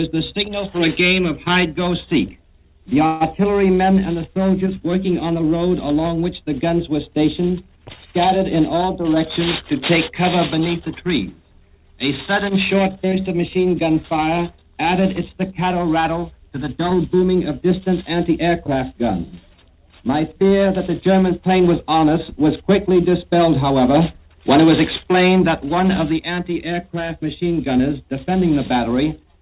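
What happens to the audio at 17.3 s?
A jitter buffer speed-up from 15.72 to 17.62 s cut repeated pitch-period slices, about 150 ms in all, so the sound runs 7% fast and hurried at unchanged pitch.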